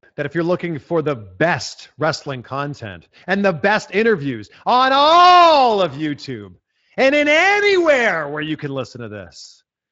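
No technical faults can be heard anywhere in this speech recording.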